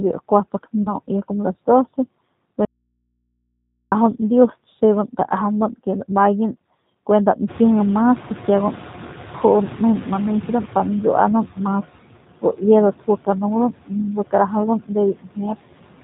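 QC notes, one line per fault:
Throughout: noise suppressor artifacts. The background is cut by about 16 dB frame by frame, so it sinks between phrases and rises under the speech. Unlike the later catching-up problem, this pumping is steady across the whole clip.
Throughout: G.729 codec. The speech is rebuilt from a vocal tract model, pitch predictor and sparse pulses at 8 kbit/s, so nothing above 4 kHz survives and the damage is plainly audible: rough, slightly synthetic and band-limited, rather than merely muffled or lowpassed.
0.83–0.94 s: VoIP packet loss concealed by the speech codec. About 30 ms of audio went missing and the decoder filled it by extending its last pitch and filter, giving a brief stretched stretch with fading gain. Unlike a dropout, there is no silence, only synthetic continuation.
2.65–3.92 s: audio dropout to a faint residue. The speech cuts out abruptly for about 1.27 s, and the gap holds only hum roughly 55 dB below the signal before sound resumes mid-flow. 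The hard edges and leftover hum point to a likely break upstream of a live input, not a pause.
7.47–11.02 s: noise suppressor catching up. Room noise jumps by about 18 dB near 7.5 s and at first passes with too little reduction, then sinks over about 3.55 s as the estimate adapts, reaching a cut of about 9 dB. The gradual settling separates this from the steady pumping.
12.42–12.62 s and 15.13–15.39 s: speech cut by the noise suppressor. The suppressor took parts of the speech for noise and turned them down with the background, by up to about 15 dB in the first instance and about 19 dB in the second, over roughly 100 ms and 150 ms. The audio sounds swallowed rather than gapped or buzzy.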